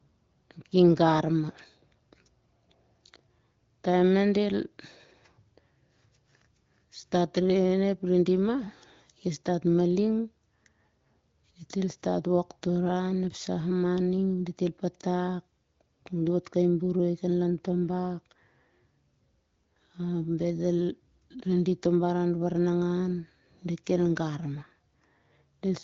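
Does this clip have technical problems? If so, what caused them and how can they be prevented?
No, nothing stood out on listening to this speech clip, which was carried over an AMR wideband (HD Voice) link at 15.85 kbit/s with its content ending around 7.5 kHz.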